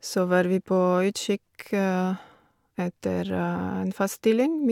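No technical faults can be heard in this speech recording.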